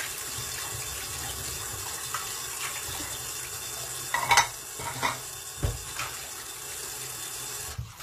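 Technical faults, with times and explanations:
Throughout, HE-AAC compression: the top end sounds bright but grainy and synthetic, with a metallic edge that doesn't blend with the body of the sound, and nothing at all above about 14.9 kHz. The likely cause is HE-AAC coding at a bitrate that fits roughly 20 kbps. Only the lower spectrum is truly coded; the treble is rebuilt by copying lower bands upward under a coarse envelope, so its detail no longer matches the original.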